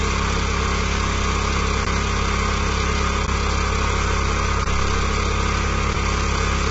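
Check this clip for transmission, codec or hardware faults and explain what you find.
Two faults are audible in this recording of everyday sounds: heavy codec damage throughout and three brief dropouts to silence.

Low-delay AAC compression runs through the whole clip. It is likely AAC-ELD at a low rate, around 16 kbps: short frames resolve harmonics poorly, so the sound is rough and grainy and nothing remains above 7.7 kHz.

Blocks of digital silence occur at 1.85, 3.27 and 4.65 s, each 15 ms long. The sound cuts out with no fade, and each is heard as a tick or brief dip.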